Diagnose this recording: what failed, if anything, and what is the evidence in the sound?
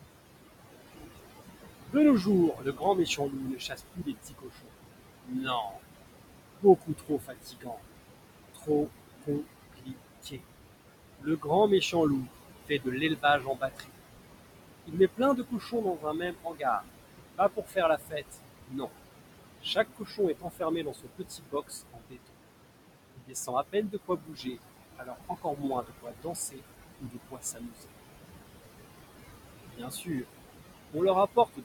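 Noise suppressor artifacts appear throughout, at the call processing stage. The background is pulled down by about 20 dB between phrases, and the noise rises again beneath the speech.

Speech is cut by the noise suppressor from 1.86 to 13.91 s, 14.85 to 27.88 s, and 29.65 s to the end. Quiet syllables drop by up to about 22 dB and sound swallowed.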